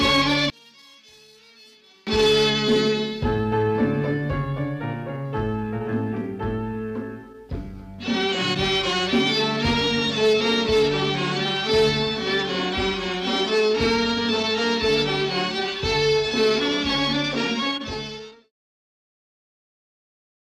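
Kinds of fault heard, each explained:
One channel inverted, 0.50 to 2.07 s: between these points the sound drops by about 31 dB, collapsing to a faint residue before returning to full level. The likely cause is one stereo channel carrying reversed polarity over this stretch, so that when left and right are summed to mono, everything common to both cancels. Only the small difference between the channels survives, which is why nearly all of the sound, background included, nearly disappears.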